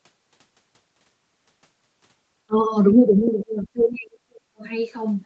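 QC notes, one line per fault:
2.46–2.74 s and 2.97–4.64 s, speech suppressed in double talk: the speech dips by about 25 dB, then by up to about 35 dB for roughly a second and a half. The likely cause is an echo canceller mistaking overlapping far-end talk for echo and attenuating both. The waveform shows sudden envelope troughs, and the spectrogram shows energy thinning and upper bands vanishing in patches.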